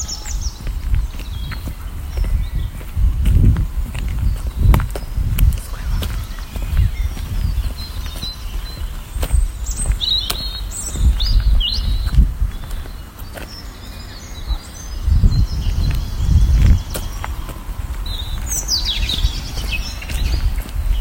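Hard clipping at 12.19 to 12.22 s and again at 15.24 to 15.27 s breaks up this recording of everyday sounds. Each time, a peak exceeded what the signal path could pass, and the waveform was cut flat. The overload is about 2 dB on the first event and about 4 dB on the second. Those flattened tops add high harmonics, so each brief peak of roughly 30 ms comes through as a short crackle, harsher at 15.24 s.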